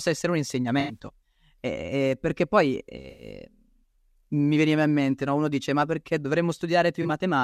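At 0.80 s, right after "essere un", the speech has a concealed stretch of about 0.16 s. That's a corrupt frame concealed: damaged AAC data got caught by the decoder, which papered over it instead of squeaking. The gap's length fits a run of roughly four frames. The same thing happens at 3.10 s after "eh perché poi", lasting about 0.14 s, and again at 7.02 s for about 0.1 s.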